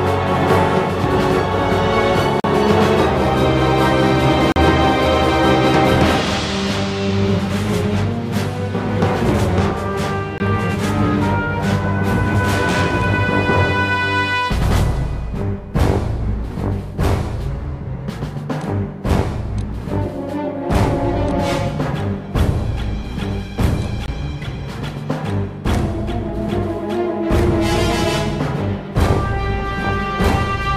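Blocks of digital silence at 2.40, 4.52, 10.38 and 24.06 s, lasting 40, 40, 20 and 20 ms. The sound cuts out abruptly and back, each gap heard as a short hole.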